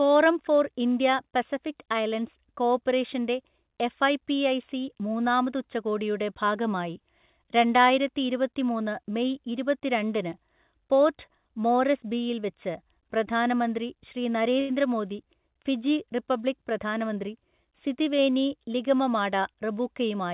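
At 14.6 s a speech sound is briefly held too long, stretched for about 87 ms until 14.71 s, with a slight buzz or dip before the speech carries on from exactly where it paused. This is a short stall from a late packet. The packet had not arrived when due, so the jitter buffer ran dry and the receiver extended the last sound to cover the gap. Nothing is lost, but the delay grows by the same 87 ms.

From 16.63 s to 18.13 s the speech sounds slightly hurried while its pitch stays unchanged, running at about 106% of normal pace. This is a jitter buffer speed-up. The buffer held more audio than its target, so the receiver trimmed it back by repeatedly cutting out short slices, each one or a few pitch periods long. Together they remove about a tenth of a second. Throughout, the band-limited sound of the G.711 mu-law call codec can be heard, with nothing above 4 kHz.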